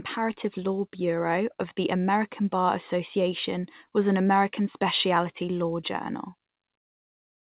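Nothing goes wrong anywhere in this speech, which simply comes across as a typical call over a G.711 mu-law link with everything above 4 kHz missing, the way that narrowband codec always sounds.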